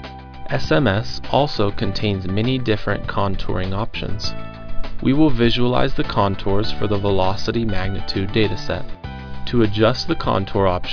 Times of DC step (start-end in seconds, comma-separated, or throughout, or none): none